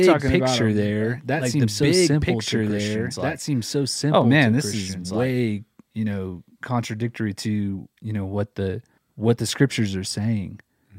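From the very start until 5.3 s the speech is heard twice at once: a second, full-band copy trails roughly two seconds behind, about as loud as the original, with no decay or room colour, and it cuts off abruptly at 5.3 s. This doubled audio track is likely caused by the same signal being captured again through a slower path, or by an edit that left two copies out of step.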